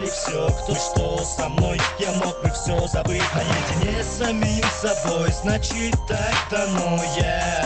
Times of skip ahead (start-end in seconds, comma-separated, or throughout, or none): 0.73